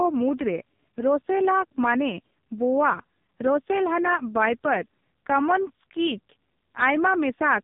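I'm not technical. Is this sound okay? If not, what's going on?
No, it's been through an AMR narrowband mobile codec, the old phone-call compression, heavily squeezed for the whole clip. Everything above 3.8 kHz is cut off, so the speech sounds muffled and thin, and the harsh squeeze makes it buzzy and a bit robotic.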